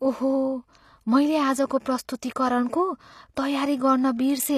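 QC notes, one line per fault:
Throughout: HE-AAC compression, likely. Treble sounds rebuilt rather than real, with gritty, lispy s sounds, fitting copied-up lower bands at about 24 kbps.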